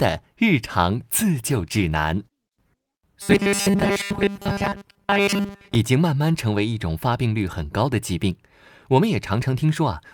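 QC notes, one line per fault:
1.46–3.03 s, call bitrate drop: the encoder's rate falls from 64 to 25 kbps and sits at its lowest for about 1.5 s. With so few bits, Opus quantises the spectrum far more coarsely and trims the upper band, so the speech turns muffled and somewhat rough, with a watery smear. Once the bitrate climbs back near the end of the range, the top end and clarity return.
3.22–5.75 s, robotic sound from repeated short buffers: the speech takes on a rigid, metallic buzz at 200 Hz that still loosely follows the syllables. The likely cause is new audio arriving too rarely, with the player looping the last short chunk to fill each gap. A 200 Hz buzz points to a repeat about 5 ms long. Roughly 70 percent of this stretch is repeats, and the real audio they displace is lost.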